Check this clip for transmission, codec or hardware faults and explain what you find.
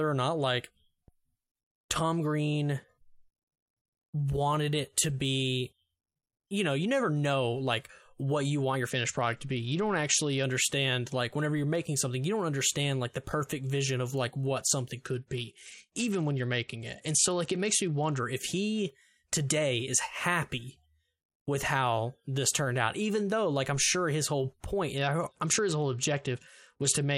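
Three stretches of dull, gritty speech point to a Bluetooth SBC bit pool drop: at 8.90–10.44 s after "what you want your", at 15.05–18.24 s after "of like what something" (recovering by "if he today is"), and at 24.97–27.18 s after "sure his whole point". Treble dulls and grainy noise appears, which fits the link cutting the bit pool from 31 to about 10 (roughly 77 kbps), starving the upper sub-bands and coarsening the rest.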